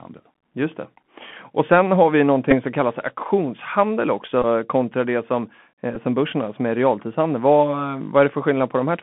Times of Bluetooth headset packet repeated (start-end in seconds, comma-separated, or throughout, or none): 2.51-2.54, 4.42-4.45, 5.95